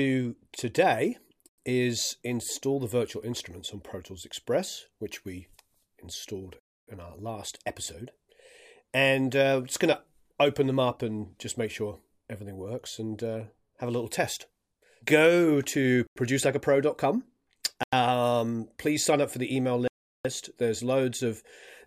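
At 1.49 to 1.58 s, 6.60 to 6.87 s, 16.07 to 16.16 s, 17.83 to 17.93 s and 19.88 to 20.25 s the audio drops into blocks of digital silence. The short gaps last 93 ms, which fits a 4096-sample buffer left unfilled. The 279 ms and 372 ms holes are whole multiples of that. Unlike a network dropout, nothing is smoothed or faded, and the gap is silence rather than low noise.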